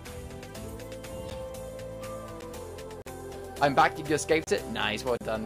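At 1.30 s and 2.41 s, a block of digital silence drops out about 10 ms of audio, heard as a tick. The output buffer was likely not filled in time. On a waveform, the trace snaps flat and back. A spectrogram shows a thin vertical stripe at each edge.

From 3.02 to 3.06 s, a gap at a join of encoded pieces opens for about 45 ms. Encoder delay and last-frame padding were never trimmed. The audio stops and then resumes where it left off. A spectrogram shows a blank column with slightly smeared edges.

From 4.44 to 4.47 s, a longer block of digital silence lasts 30 ms. It sounds like a brief hole. On the waveform it appears as a flat line with no fade.

From 5.17 to 5.21 s, a second join gap lasts about 34 ms.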